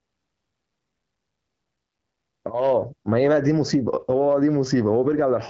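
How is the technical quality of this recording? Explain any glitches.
No glitches stand out.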